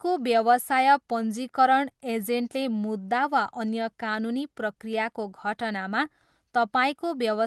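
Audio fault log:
The speech signal shows no faults, and its usual coding texture and high-frequency ceiling near 12 kHz fit a WebRTC call path carrying Opus at around 24 kbps.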